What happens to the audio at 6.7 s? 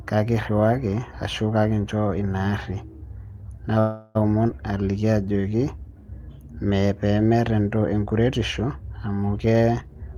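Nothing goes wrong at 6.7 s; the speech carries on intact through that moment.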